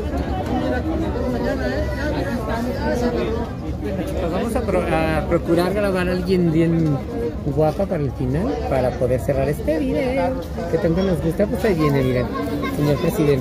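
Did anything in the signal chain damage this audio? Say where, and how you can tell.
No, nothing in the signal chain audibly damaged this audio; the signal holds steady throughout with no break, distortion or interruption at any stage.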